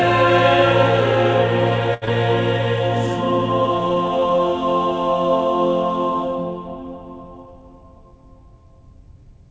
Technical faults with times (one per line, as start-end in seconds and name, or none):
1.94-2.05 short stall from a late packet
2.05-2.10 short concealed packet loss
3.95-4.38 jitter buffer slow-down